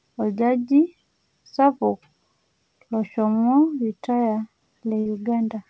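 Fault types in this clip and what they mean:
Burst of packet loss: a run of packets around 5.00 to 5.07 s never arrived in time, so the receiver stretched the last sound for about 54 ms while fading it down, then resumed with 60 ms of the speech skipped over.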